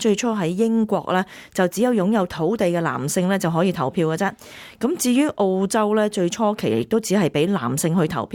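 No technical faults are audible.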